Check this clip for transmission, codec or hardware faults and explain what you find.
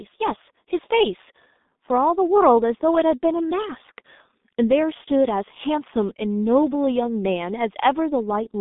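The speech carries G.723.1 codec damage from start to finish, and it is heavy. The coder works on 30 ms frames at a very low rate, which fits its 6.3 kbit/s mode. It rebuilds the voice from a slowly updated model, so consonants smear and vowels turn hoarse and muffled. The telephone line band runs about 200 Hz to 3.7 kHz. A spectrogram shows an empty region above 3.8 kHz and blurred, frame-stepped harmonics below.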